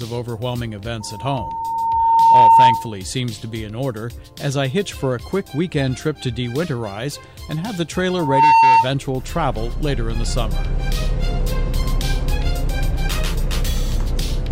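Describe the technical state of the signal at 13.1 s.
At 13.1 s the signal is intact, with no audible fault at that moment.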